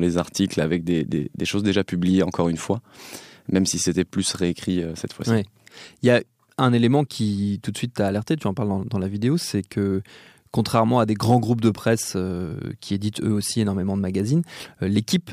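No technical faults can be heard anywhere in this speech recording, with the signal holding steady throughout.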